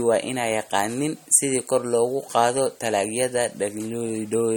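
Speech throughout, with two problems. The whole clip has plainly audible MP3 compression damage, a watery, swirly texture where weak detail flickers in and out between frames, and nothing above 18 kHz. That's likely an MP3 encode at a low bitrate, something around 48 kbps, where the encoder runs short of bits, drops the treble and zeroes the quieter frequency lines. Layered on top, from 0.19 s to 4.53 s, there's a faint, steady ticking, roughly one tick every 0.15 s and about forty in all. Those are clock slip clicks, each sounding like a single sample dropped or repeated. The cause is likely two devices running on unsynchronised clocks that disagree by a couple of hundred ppm, so the error builds to a whole sample at that regular rate.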